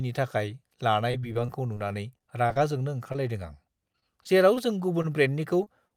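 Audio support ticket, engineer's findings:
Repeated packet loss (robotic sound), 1.11–2.57 s and 3.92–4.58 s: network dropping packets in bursts, decoder concealment extending prior audio. Speech turns choppy, gaps up to 31 ms.

Jitter buffer slow-down, 1.92–2.79 s: receiver building reserve by repeating pitch periods, adding 57 ms. Speech plays at 94% speed, same pitch, sounds drawn out, overlapping the first loss burst.

Short concealed packet loss at 3.12–3.16 s, 5.64–5.68 s and 5.88–5.92 s: about 20 ms lost each time, patched by decoder extrapolation. Brief smear or wobble, short consonant may drop.

Short stall from a late packet, 5.02–5.06 s: jitter buffer ran empty, playout held for 19 ms until arrival. Nothing lost, but one sound lingers with a slight buzz or dip.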